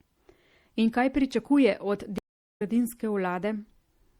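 Speech runs throughout with a watery, swirly texture and dulled top end, plainly audible damage that likely comes from MP3 compression at a low bitrate, consistent with about 64 kbps. On a spectrogram this shows as a hard treble ceiling and speckled high-frequency patches blinking on and off between frames. After "kaj pričakuje od", a stream reconnect breaks the audio from 2.18 s to 2.62 s. A flat, empty gap of about 420 ms appears in the waveform, and the sound resumes roughly half a second further on, so that stretch is skipped, with a soft first frame as the fresh decoder starts.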